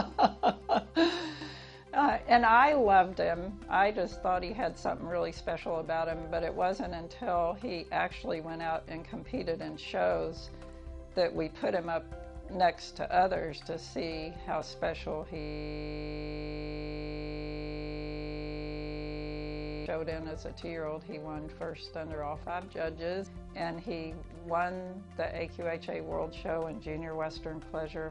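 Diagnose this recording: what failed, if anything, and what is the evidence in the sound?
The failure is a system hang loop at the driver or buffer stage. From 15.40 s to 19.86 s the audio is replaced by a steady buzz. One 20 ms slice repeats exactly, 223 times, at 50 Hz. The host or driver stopped supplying new samples. The sound hardware kept reading the same small ring buffer. A loop this short fuses into a tone at its repeat rate rather than a stutter.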